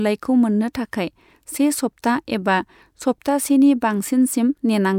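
Speech recording with no technical faults to report.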